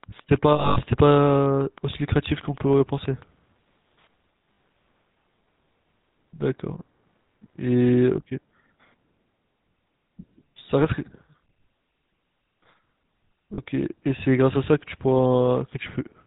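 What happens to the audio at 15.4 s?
At 15.4 s the speech is still passing through the GSM full-rate codec damage that runs through the whole clip. Its coarse pulse-driven excitation model gives a plainly audible buzzy, gravelly roughness, with nothing above 4 kHz, which fits a 13 kbps rate.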